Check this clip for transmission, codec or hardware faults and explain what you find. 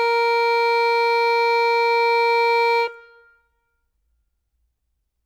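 No faults found in this music.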